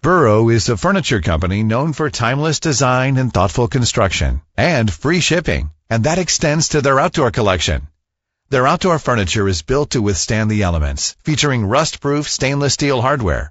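Low-delay AAC compression runs through the whole clip, with plainly audible damage. The speech sounds rough and grainy, with noise filling the gaps between harmonics. This is likely AAC-ELD near 32 kbps, whose short frames resolve pitch harmonics poorly at that rate.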